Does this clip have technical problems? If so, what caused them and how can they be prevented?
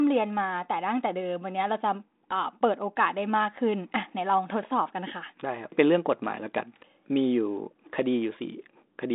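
No, this clip has no technical problems.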